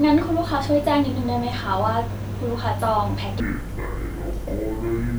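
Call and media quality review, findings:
Stereo read as mono, 3.40 to 5.18 s: interleaved left/right samples decoded as one channel. Speech drops to half speed, an octave low, to the end.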